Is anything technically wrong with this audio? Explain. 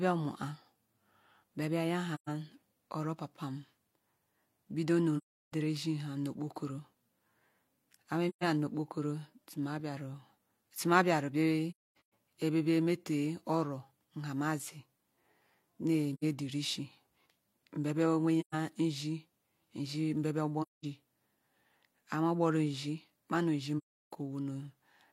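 Yes. The speech drops into soft-edged silences, right after "mbia bia" at 2.14 to 2.29 s, then at 5.17 to 5.53, 8.29 to 8.44, 11.71 to 12.12 (broken up, the longest hole around 0.3 s), 16.14 to 16.24, 18.40 to 18.55, 20.62 to 20.85 and 23.78 to 24.13 s. This is AAC frame loss with muting. Frames went missing, the decoder zeroed their spectrum, and the overlapping windows faded the sound out and back in.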